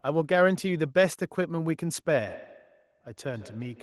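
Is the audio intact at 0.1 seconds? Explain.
Yes, the audio is intact at 0.1 seconds, with no dropout, click, distortion or other fault audible at that moment.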